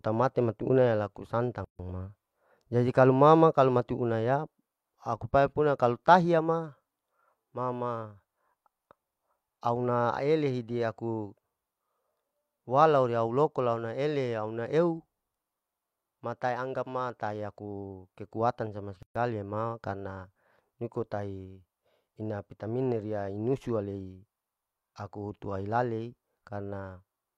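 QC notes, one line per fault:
1.65–1.79 s and 19.03–19.16 s, gap at a join of encoded pieces: the speech drops out for 146 ms and then about 130 ms (the second between "tahiya aku kekutan sama" and "ma karna niko tahi"), because separately encoded chunks were butted together with their start-up delay and final-frame padding left in, leaving silences with codec-smeared edges before the speech resumes.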